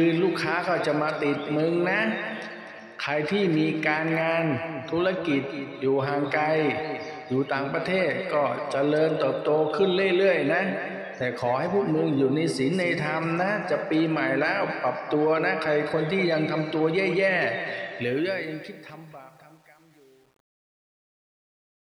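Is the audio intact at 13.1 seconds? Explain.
Yes, the audio at 13.1 seconds is intact, with no fault audible at that moment.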